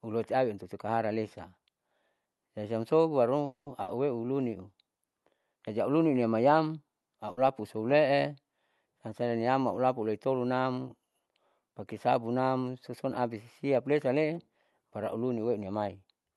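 At 3.45 s the sound stops moving forward for about 210 ms, until 3.68 s. The last sound is held as a fading buzz or hiss, then about 120 ms of silence follows before the audio resumes exactly where it left off, with nothing lost. This is a call audio freeze, likely caused by packets delayed in transit draining the jitter buffer. The waiting time is inserted into the stream, so playback runs about 210 ms later from here on.

Shortly after, at 3.82 s to 3.96 s, comes a burst of packet loss. About 60 ms of audio never arrives. The receiver covers the gap by extending the last sound and fading it, then resumes further along. The result is a brief held, fading sound followed by a small jump. The same fault recurs at 7.31 s to 7.39 s, again with about 60 ms missing and concealed by a short decaying continuation.

From 15.63 s to 16.34 s the jitter buffer speed-up sets in. The buffer is holding more audio than its target, so the receiver trims short pitch-period segments repeatedly, roughly a tenth of a second in total. 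Playback runs at about 113% of normal speed while the pitch stays unchanged, which makes the closing moment sound rushed.

Throughout, the Opus call path limits the audio to about 12 kHz and adds its usual coding noise.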